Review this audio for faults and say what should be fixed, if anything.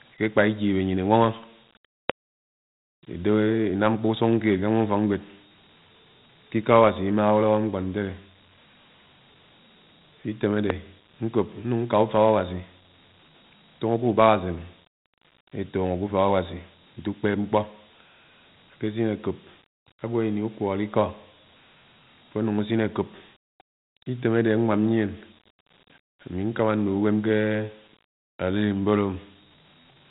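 The whole clip carries Dialogic VOX ADPCM damage, plainly audible as a gritty hiss riding on the speech and a band that stops at 3.9 kHz. The coder stores each sample as a 4-bit step relative to a predicted value, and at 32 kbps that fits 8,000 samples a second. The coarse step adapts too slowly for sharp changes, producing the grain. To prevent this, record or archive in linear PCM and convert to VOX only for the phone system's final copy.

There are two loud pops, at 2.10–2.12 s and 10.70–10.72 s, each a single sharp transient roughly 20 to 25 dB above the speech, which continues underneath. The likely cause is a voltage step or spike entering the chain from a plug, switch, static discharge or driver glitch, which the downstream circuitry shapes into a brief click. To prevent this, secure connectors, avoid switching or handling gear while recording, and ground the setup properly.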